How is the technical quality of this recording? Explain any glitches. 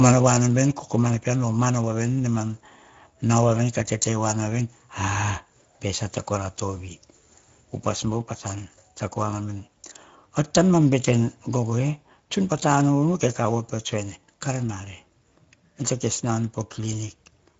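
The recording is audibly degraded by codec damage from start to finish.

Speex codec, throughout the clip: this CELP speech coder rebuilds the voice from a predictive filter and a coarsely coded excitation. The limited detail, which fits a rate of about 16.8 kbps, leaves the speech noticeably noisy and hoarse. Nothing is present above 7.6 kHz, and the band between 4 kHz and that limit sounds like a shaped hiss rather than real speech detail.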